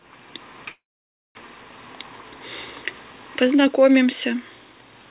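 From 0.7 to 1.37 s the speech halts, the last sound trailing off as a short fading buzz before about half a second of silence, then resuming where it stopped. This call audio freeze likely came from delayed packets emptying the jitter buffer, inserting a 650 ms gap.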